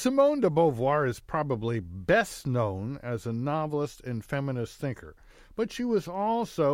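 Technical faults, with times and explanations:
Nothing technical stands out in this speech recording; there's no fault to list here.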